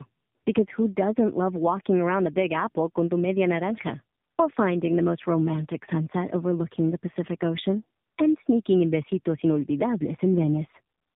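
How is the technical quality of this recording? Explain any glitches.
Quality's pretty rough throughout, and it's down to tandem speech coding. Across the whole clip the speech sounds like it went through two narrowband mobile-style coders in a row, the second re-squeezing the first's damaged output. That leaves it rough, muffled and warbly, with nothing above 3.8 kHz.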